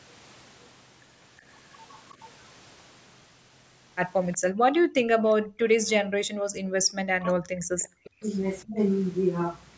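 At 1.92 to 2.30 s a faint delayed copy of the speech trails in, about 25 dB below the talker and lagging by 367 ms. That is an echo leak, likely from a far-end loudspeaker whose echo canceller let part of the signal its microphone picked up slip back down the line. Unlike room reverberation, which smears continuously behind every syllable, this is a distinct, separate repeat at a fixed delay. Shorter scraps of it recur at 4.32 to 4.38 s, 5.27 to 5.33 s and 7.24 to 7.32 s, the later two even fainter, around 30 dB down.

Between 4.53 and 5.41 s the background gated by the echo canceller becomes audible. The room tone drops by up to about 39 dB in short dips adding up to roughly 0.4 s, then springs back. The canceller clamps the microphone while the loudspeaker plays. What separates this from double-talk suppression is that only the ambience vanishes. No speech is being cut.

From 5.69 to 8.78 s comes speech suppressed in double talk. 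With both sides talking, the canceller seems unable to tell the local voice from the loudspeaker echo and turns everything down. The talker's speech dips by as much as about 40 dB, for around 2 s in total. Because it bites into words rather than pauses, it is distinct from the gated background.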